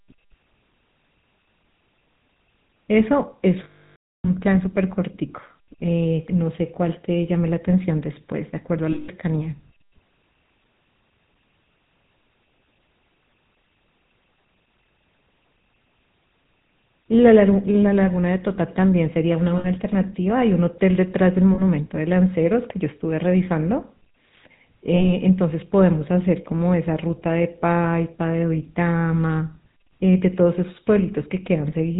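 Throughout, the speech sounds buzzy and gravelly with nothing above 4 kHz, the plainly audible mark of the GSM full-rate codec, consistent with 13 kbps. At 3.64–4.29 s, 8.92–9.09 s, 19.58–19.67 s, 21.54–21.62 s and 24.96–25.13 s, the sound freezes into a rough metallic ring. These are lost GSM frames, filled in by repeating the last good frame.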